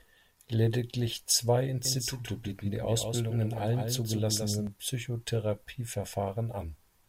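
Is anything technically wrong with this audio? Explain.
Yes. From about 1.85 to 4.67 s there's a doubled audio track: a second, somewhat quieter copy trails roughly 150 ms behind, dry and full-band, switching in and out abruptly. Likely a slower second capture path mixed in alongside the main one.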